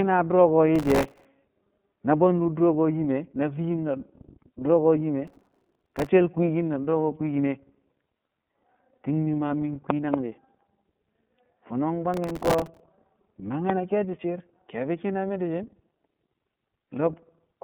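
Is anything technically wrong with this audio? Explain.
Yes, there are three separate problems in this speech clip.

The whole clip has gone through the iLBC codec at 13.33 kbps in 30 ms frames. Each frame's excitation is coded on its own, so the speech sounds slightly rough and synthetic. The line band runs from 150 Hz to 3.5 kHz, and nothing above 3.7 kHz survives, which makes it sound plainly narrowband.

Processor overload crackle shows up three times: 0.76 to 1.25 s, 5.27 to 6.09 s (ending right before "shel kwiikin da"), and 12.14 to 12.80 s. Tiny buffers, around a millisecond and a half, kept missing their deadlines, so stale audio got replayed with hard edges. You hear that as a gritty tearing over the speech.

A loud pop lands at 13.70 to 13.72 s, a single sharp hit about 15 dB above the speech, which carries on underneath. It's likely a voltage spike from a plug, switch, static or driver glitch that got added to the signal.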